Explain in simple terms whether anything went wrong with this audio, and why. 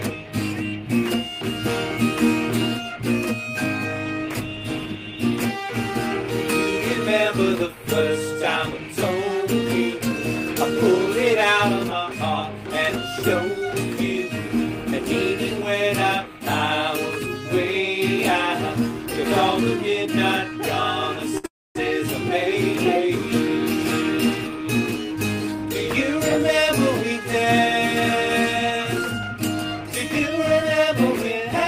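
At 21.37 s there's a short stall from a late packet: the last sound gets held for about 65 ms while the receiver waits, so it drags slightly. Right after, from 21.46 to 21.77 s, comes a call audio freeze. A fading buzz gives way to about a quarter-second of silence, likely because packets got held up on the network, and then the sound picks up where it stopped. From 24.48 to 27.75 s and again from 29.02 to 31.64 s you get a jitter buffer speed-up. The receiver snips out tiny slices to catch up, so the sound runs about 3% and then 2% faster at the same pitch, trimming roughly a tenth and then a twentieth of a second.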